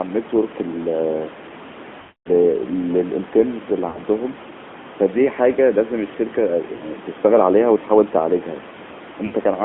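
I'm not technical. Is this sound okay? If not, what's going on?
No. The call went through the AMR narrowband mobile codec, which squeezes speech into a narrow phone band, so the voice sounds thin, muffled and plainly buzzy throughout.

There are also lost AMR speech frames, where radio errors spoiled pieces of the signal and the phone guessed to fill them. The voice smears and fades out around 2.0 to 2.3 s, and briefly warbles at 3.9, 6.8 and 9.3 s.

The faint background room noise belongs to the recording itself, not the phone system.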